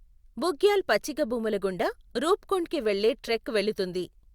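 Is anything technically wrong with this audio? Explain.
Yes. From 3.27 to 3.30 s a short squeaky blip cuts across the speech, peaking around -25 dBFS. This is a corrupt frame decoded: flipped bits in roughly one compressed frame gave the decoder wrong gains or codes, so it put energy at the wrong frequencies.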